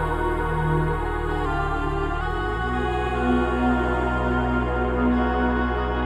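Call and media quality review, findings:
Drift correction step, 1.46 to 2.21 s. Clock-matching resampler likely dropped its playback rate about 5.7% in one step to rebalance its buffer, then restored it. Music slows and sags 102 cents, about a semitone flat, for 0.75 s; held tones detune audibly, then snap back to pitch.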